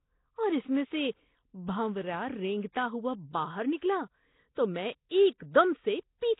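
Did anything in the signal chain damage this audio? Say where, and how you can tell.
Yes. The damage happens at the codec stage, across the whole clip. The speech has a rough, hissy halo and a smeared, underwater quality, and nothing reaches above 3.8 kHz. That points to heavy Nellymoser compression as the likely cause, at a bitrate consistent with about 16 kbps. The codec gives each short block a fixed, tiny bit budget. Weak bands get no bits and are filled with noise. On a spectrogram this looks like a hard ceiling at 3.8 kHz, with blotchy, noise-textured patches where the harmonic detail should be.

The same codec also produces pre-echo. The first instance runs from 5.38 to 5.40 s, just after "تو میں", and the second is at 5.54 s. Each sharp attack is preceded by a brief hiss, spread over about 21 ms and 11 ms respectively, and the attack itself sounds softened. The quantisation noise sized for the loud onset is spread across the whole transform block, so it also fills the quiet moment before it. 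A waveform shows a low fuzzy smear leading into each onset, and a spectrogram shows a faint broadband haze just before the transient.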